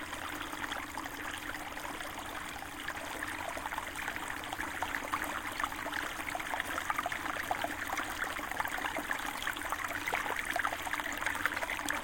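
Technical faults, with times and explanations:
Careful listening turned up nothing in the recording that stood out as a technical problem.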